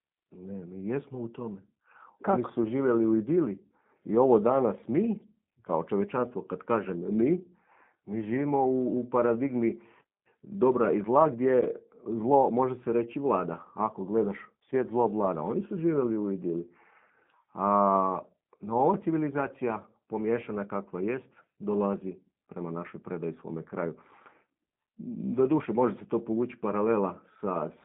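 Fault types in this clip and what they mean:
G.729 codec: a low-rate speech codec that models each 10 ms frame as a vocal tract filter, a pitch predictor and a sparse set of excitation pulses, which fits an 8 kbit/s stream. In this speech the band is confined to roughly 150 Hz to 3.6 kHz, with nothing above 3.7 kHz, so sibilants sound dull. The damage is plainly audible throughout as a rough, slightly synthetic buzz on the voice.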